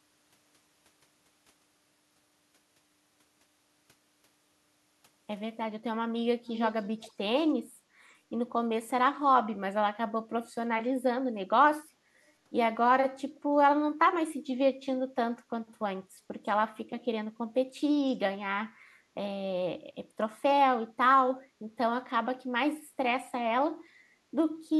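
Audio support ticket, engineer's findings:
Echo leak, 6.46–7.12 s: delayed speech copy trailing by 336 ms, about 10 dB down. Likely far-end speakerphone echo canceller passing mic residual back.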